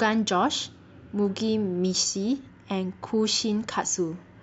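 No audible faults anywhere in the speech recording.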